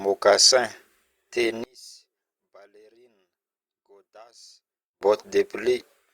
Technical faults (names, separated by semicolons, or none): one channel inverted